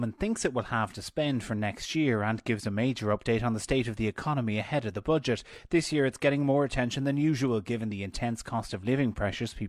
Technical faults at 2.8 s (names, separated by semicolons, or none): none